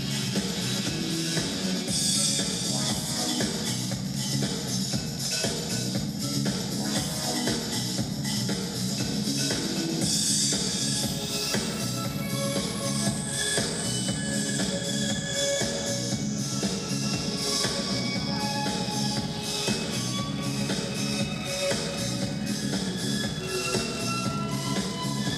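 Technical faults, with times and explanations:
19.28 s, dropped samples: a handful of samples, roughly a tenth of a millisecond's worth, likely went missing from the stream, so the waveform leaps straight from one value to a later one with nothing in between. That gap is far too brief to take away any audible sound. The sudden step is heard as a single sharp click and would show as a thin vertical line running up the spectrum at that instant.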